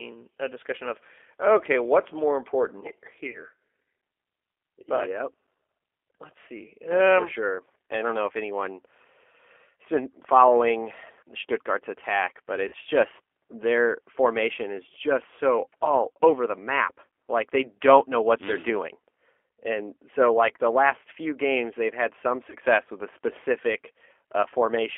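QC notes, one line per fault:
Throughout, G.729 codec: speech is coded at 8 kbit/s and confined to a 300 Hz to 3.4 kHz line band, leaving it thin, audibly rough and slightly synthetic.
3.30 to 3.38 s, 12.68 to 12.75 s, 22.50 to 22.55 s, VoIP packet loss concealed by the speech codec: about 40, 40 and 20 ms of audio went missing. The decoder stretched its last frame into a brief fading buzzy tone or coloured noise.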